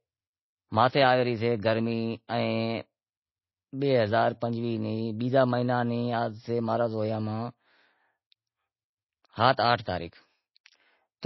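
Speech with nothing above 5.8 kHz throughout, plus smeared low-bitrate artefacts; likely low-bitrate audio saved at a high bitrate, consistent with MP3 near 24 kbit/s re-encoded around 181 kbit/s.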